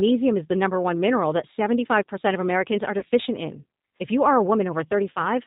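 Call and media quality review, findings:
G.729 codec, throughout. Band-limited, nothing above 4 kHz; speech rough and synthetic, plainly audible damage. Component: speech codec, sound fits G.729A at 8 kbit/s. Mechanism: speech rebuilt from vocal tract filter, pitch predictor, sparse pulses per 5 ms subframe.

VoIP packet loss concealed by the speech codec, 2.99–3.04 s and 5.13–5.20 s. Brief buzzy or noisy, smeared fade in speech, weak or distorted voice after. Component: decoder concealment, each fits one lost 30 ms packet. Mechanism: last pitch and filter extrapolated with falling gain.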